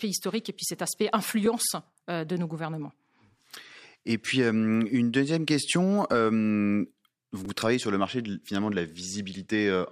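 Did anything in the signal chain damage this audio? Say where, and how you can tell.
Yes, a repeated buffer at the driver/buffer stage. After "et puis cet aspect" at 1.46 s, a 5.33 ms slice plays twice, and at 7.45 s, before "travaillez sur le marché", three times: clicky buzzes fitting a 256-sample buffer. Late data forced replays. Unlike a dropout, nothing is lost.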